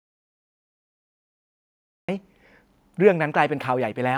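The input signal was likely lost before the clip begins, with the recorder writing silence in place of audio until the connection came back at 2.09 s. This audio dropout to silence leaves the first half of the speech clip completely dead, with no room tone or background hiss at all, and then the speech arrives abruptly in mid-flow rather than easing in, so whatever came before that point is missing.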